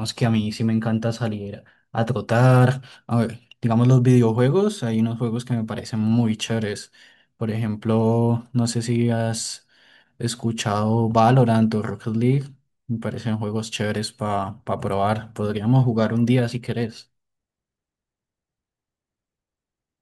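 Speech recording with no technical faults to report. Nothing in it points to a problem anywhere along the path from capture to playback.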